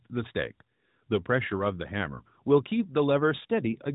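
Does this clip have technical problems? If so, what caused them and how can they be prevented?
No, there are no technical problems to address here.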